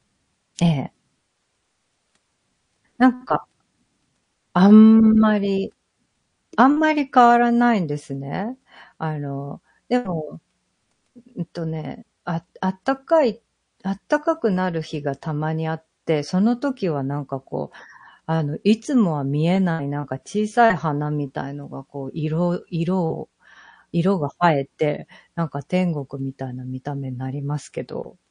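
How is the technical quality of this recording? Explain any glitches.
The speech carries plainly audible codec damage throughout, with one pre-echo near the start.

Throughout the clip the speech sounds watery and swirly, with dulled treble and metallic chirps on s sounds. This is likely MP3 compression at a low bitrate, which fits roughly 40 kbps: short of bits, the encoder cuts the high frequencies and lets weak spectral lines flicker between frames.

At 0.55 to 0.59 s a hiss, about 15 dB above the surrounding background, runs for 34 ms just ahead of a sharp onset, softening it. This is pre-echo. The quantisation noise from the loud attack spread across its whole transform block, filling the quiet moment before it. The smear fits a window of about 52 ms and an encoder that never switched to short blocks.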